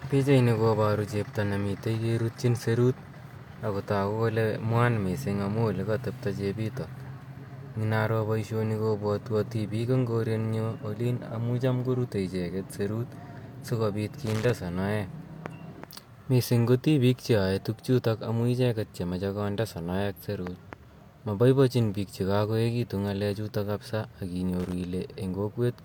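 Speech recording with two bursts of loose connector crackle, at 14.26 to 14.50 s just after "icheget serut si kopit", and again at 24.59 to 24.73 s. A worn or dirty contact is making and breaking as it moves, chopping the signal. On the waveform these appear as ragged gaps and sharp spikes; on a spectrogram, as clusters of thin broadband vertical streaks.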